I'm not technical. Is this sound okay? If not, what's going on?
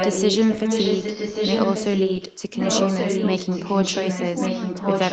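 No. What you're hearing is an echo leak. The likely cause is that someone on the call was using a loudspeaker, and their device failed to filter out its own speaker's sound before sending audio back. From 0.0 to 2.42 seconds, and again from 2.61 seconds to the end, the speech is followed by a repeat of itself about 1.1 seconds later. That repeat is roughly as loud as the original, so the two overlap.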